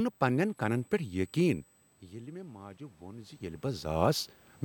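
A USB whine runs throughout at a steady 8 kHz, roughly 30 dB below the speech, from the bus's 125-microsecond microframe current leaking through power or ground. From 2.01 to 3.99 s, automatic gain is rising: after the input fell about 17 dB, the control raised gain about 4 dB, swelling voice and room noise together.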